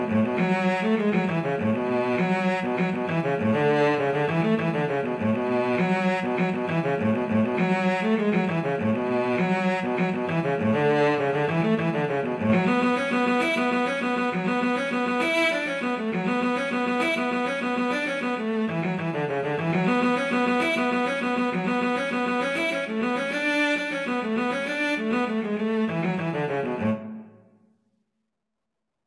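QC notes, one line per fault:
No faults found on this clip; nothing to log.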